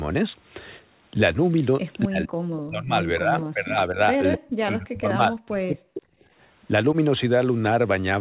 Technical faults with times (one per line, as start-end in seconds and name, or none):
2.07-4.00 speech suppressed in double talk
3.42-3.46 echo leak
4.32-4.38 echo leak
4.36-6.05 speech suppressed in double talk